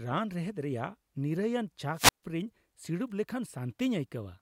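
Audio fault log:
1.93–2.24 s wireless microphone squelch dropout: the radio signal fades, hiss rises, and the receiver squelch mutes the output for about 143 ms before the speech returns.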